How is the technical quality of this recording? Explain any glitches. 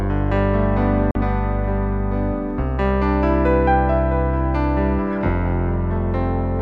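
There is one glitch: a short gap of silence from 1.11 to 1.15 s, consistent with a Bluetooth dropout. For about 43 ms the audio cuts out, then resumes mid-flow rather than picking up where it stopped. The likely cause is wireless packets that failed to arrive at the receiver in time and were discarded. The missing stretch fits roughly two lost packets, and playback rejoins the stream at its current position.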